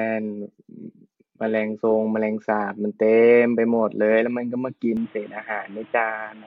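Input switched to a poorer device, from 4.97 s to the end at 6.46 s: the speech abruptly turns duller and boxier, with nothing above 3.8 kHz, and new background noise appears roughly 30 dB under the voice. There is no gap at the change and no obvious jump in loudness. The likely cause is the system changing its capture input mid-recording to a narrower-band microphone or a headset's call profile, which brings its own bandwidth limit, coloration and noise floor.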